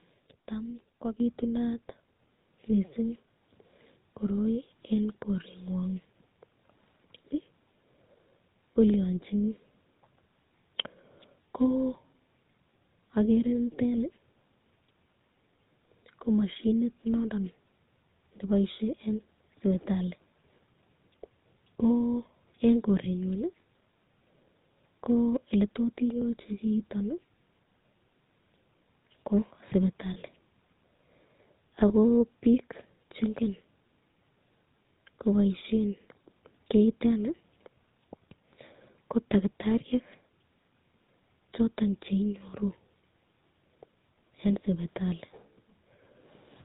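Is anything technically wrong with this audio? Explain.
Yes, a few things. The whole clip carries codec damage, and there are three short events on top of it.

GSM full-rate codec: This runs the whole way through and is plainly audible. The codec rebuilds the voice from a vocal-tract model excited by a sparse pulse train, and it throws away everything above 4 kHz. That gives the speech its dull, band-limited quality and a buzzy, gravelly texture. The sound fits the old 13 kbps full-rate GSM coder.

Microphone volume stepped up: At 1.2 s the level jumps by about 7 dB in one step. Voice and background both get louder together, because this isn't anything in the room. The call software decided the mic was too quiet and bumped the device's input gain in a single move, instead of ramping it smoothly.

Lost GSM frames: There are two brief glitches, at 30.14 to 30.17 s and at 31.88 to 31.91 s. 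The second one sits right before "pik chengen". Each covers about 20 ms, which fits a single dropped frame. The decoder filled each gap by repeating the last good frame's parameters. That's why you hear a quick rough, metallic ringing smear instead of a clean cut to silence.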